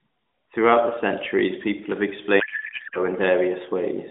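From 2.40 s to 3.00 s the speech gives way to a codec payload misread. The sender packed its AMR frames octet-aligned, but the receiver parsed them as bandwidth-efficient, so each field is read from the wrong bit offset. For about 0.6 s the sound is garbled noise and warble that barely tracks the speech. On a spectrogram the harmonic striations vanish into a smeared, patchy band below about 3.6 kHz. The waveform envelope loses its syllable shape until the format lines up again.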